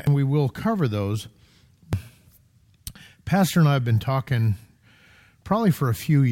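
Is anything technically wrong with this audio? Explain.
Yes. Damaged data in a compressed stream shows up twice in this speech, at 0.07 s and again at 1.93 s. At each point some bytes of the compressed stream were lost or corrupted, so the decoder misread the affected frame, lost synchronisation and had to hunt for the next valid frame header before decoding resumed. Each event is momentary and is heard as a brief chirp or blip.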